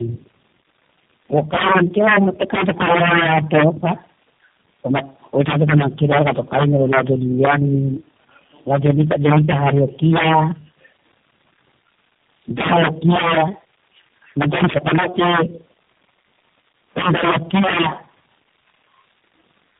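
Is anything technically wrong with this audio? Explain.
Yes, there are two faults.

Tandem speech coding affects the whole clip. The speech sounds rougher, more muffled and more warbly than a single low-rate codec would make it, and nothing is left above 3.6 kHz. That points to about three speech coders in a row, consistent with AMR-NB, iLBC and G.729A joined by G.711 links. Each coder re-encodes the previous one's errors, so the artefacts stack. A single bad codec would sound narrowband but not this smeared and watery.

Integer overflow occurs from 1.36 to 3.91 s, 8.73 to 10.39 s, 12.58 to 13.41 s, 14.42 to 15.41 s and 16.97 to 17.87 s. The signal is driven about 12, 7, 12, 10 and 17 dB past the limit in those stretches. Each peak that exceeds full scale wraps to the opposite sign, producing violent, sharp cracks on loud syllables. Clipping flattens the peaks into a milder distortion, but here the waveform jumps across the full range, which is why the cracks are so much more abrupt.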